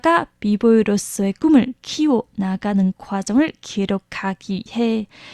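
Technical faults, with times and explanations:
No technical faults found in this speech recording.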